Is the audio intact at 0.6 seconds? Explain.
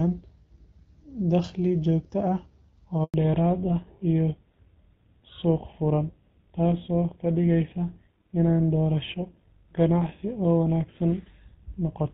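Yes, the audio is intact at 0.6 seconds, with no fault at that moment.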